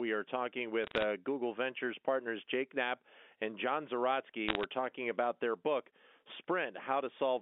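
Right after "are talking", from 0.84 to 1.04 s, and again from 4.49 to 4.64 s before "talking about their book", there's crackle from bit errors on a digital phone line: a few flipped bits per thousand each knock one sample astray, giving sharp ticks over the speech.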